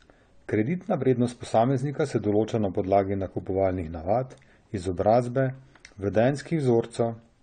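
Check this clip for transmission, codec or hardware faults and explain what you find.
The speech carries audible codec damage from start to finish, and the likely cause is AAC compression. Nothing reaches above 9 kHz, so the top is dull, and sibilants and held vowels take on a watery, fizzy warble. That fits AAC-LC at a low bitrate around 32 kbps, where the encoder drops the upper band and quantises frequency lines coarsely. On a spectrogram there is a flat ceiling at 9 kHz with patchy, blocky holes below it. The waveform shows little.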